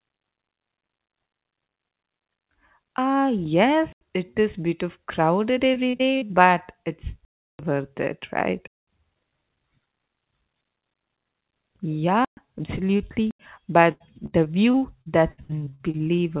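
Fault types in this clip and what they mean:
Block of digital silence: The sound cuts to pure silence and back with no fade. There are five such holes, lasting from 85 ms to 341 ms. The 85 ms ones, at 3.93 s and 13.31 s, fit a 4096-sample block.
Repeated packet loss (robotic sound): Speech turns choppy and robotic twice, just after "is bit of crowded" from 5.74 s and again from 13.92 s to 16.20 s. Each missing piece, up to 84 ms long, is filled by extending the last sound. About a quarter of each stretch is patched this way.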